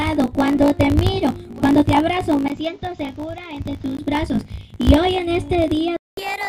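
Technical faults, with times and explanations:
Throughout: block size mismatch (truncated). One stage hands on longer blocks than the next stage takes in, which fits 1024-sample blocks being written, and the tail of every block is discarded. Those regular cuts put a steady buzz at about 54.4 Hz under the whole clip, and because a slice of audio goes missing each time, everything plays back 1.16 times faster than it should while the pitch stays about where it belongs.
2.48 to 3.98 s: input switched to a poorer device. The recording input changes mid-stream, likely to another microphone or a headset's call profile, with a short gap of about 20 ms at the switch. The new input passes a narrower band, so the sound turns dull and boxy, drops roughly 5 dB in level and carries its own background noise about 35 dB below the signal. At 3.98 s the fuller, clearer sound comes back.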